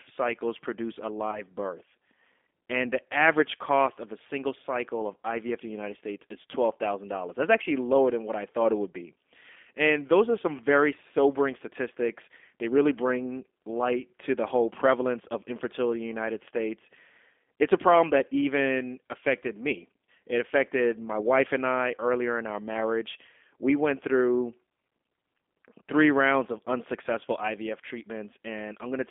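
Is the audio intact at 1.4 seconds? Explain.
No, it isn't. Right after "cycles produce a", from about 1.31 to 1.44 s, there's VoIP packet loss concealed by the speech codec. A 20 ms gap, consistent with a single dropped packet, gets filled by the decoder stretching its last pitch and vocal tract filter at falling gain. That comes out as a short buzzy or noisy, fading smear. Because each frame builds on the one before, the sound stays weak or distorted for tens of milliseconds after the gap.

Underneath that, the whole clip is running through the G.729 codec at 8 kbit/s. The line is held to about 250 Hz to 3.5 kHz, and the speech is rebuilt from a filter, a pitch predictor and a few pulses per frame, which gives it a plainly rough, synthetic edge even at 1.4 s.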